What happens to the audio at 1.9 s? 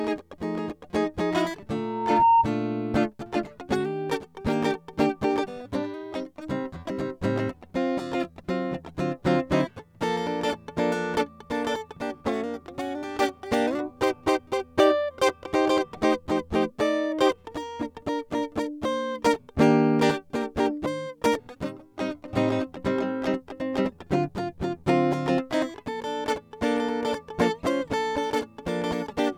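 At 1.9 s the music is caught in a loudspeaker feedback squeal, running from 1.73 to 2.49 s. A microphone is picking up the speaker it drives, and at 922 Hz the loop gain tops one, so that frequency feeds on itself and swells over about half a second to roughly 10 dB above the music. Unlike a steady whine or interference tone, it grows from nothing rather than appearing at full level.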